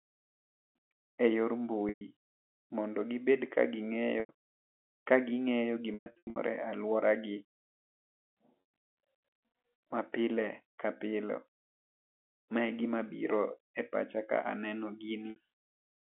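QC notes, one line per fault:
1.89–2.01 s, packet loss with pitch repetition: a 120 ms gap, bridged by repeating the last pitch period, gives a held, buzzy tone that fades out before the speech returns.
4.20–4.29 s, packet loss with pitch repetition: right after "gi bed ka gi", 90 ms goes missing; the repeated pitch cycle sounds like a briefly frozen, buzzy sustain.
5.94–6.36 s, packet loss with pitch repetition: 300 ms lost in bursts across 420 ms, longest run 120 ms. The speech stutters between buzzy held fragments and fades, consistent with 30 ms packets dropping.
8.61–9.03 s, packet loss with pitch repetition: another scattered 300 ms across 420 ms. The 150 ms run fades toward silence, then the speech cross-fades back in.
15.30–15.36 s, packet loss with pitch repetition: a short 60 ms loss, heard as a slight buzzy hold, concealed by repeating the last pitch period over the narrowband telephone line.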